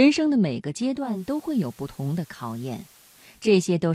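At 0.91 s the speech fades over about 0.39 s into a noisier, slightly quieter version: the digital radio is blending to analogue, having lost its digital signal and cross-faded to the station's FM broadcast. Level falls by about 2 dB and a hiss rises to roughly 30 dB below the speech, until the blend back to digital ends at 3.59 s. On a spectrogram, a broadband noise haze fills the gaps; the waveform shrinks slightly and never settles to silence.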